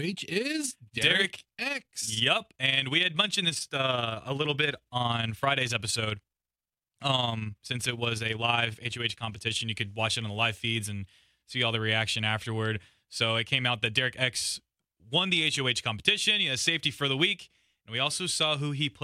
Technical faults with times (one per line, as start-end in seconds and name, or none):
0.00-9.65 overlap-add ripple